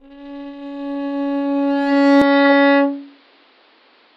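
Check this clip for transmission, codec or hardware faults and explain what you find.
One fault turns up. At 2.22 s the sound abruptly goes dull and stays that way to the end: nothing above 5.4 kHz, a few dB quieter, with a faint new noise floor well below it and no gap at the changeover. That's most likely the input switched to a poorer device, a narrower-band mic with its own level and hiss.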